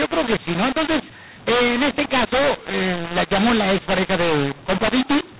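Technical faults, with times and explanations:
Throughout, mu-law and A-law mixed up: speech carried over G.711 telephone coding was written as mu-law but read back as A-law, so sample levels are mis-mapped, some too loud and others too quiet, producing harsh distortion, while near-silent samples are raised, filling pauses with noise.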